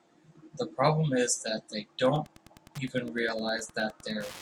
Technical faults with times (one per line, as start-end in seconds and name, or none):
1.99-4.41 Wi-Fi interference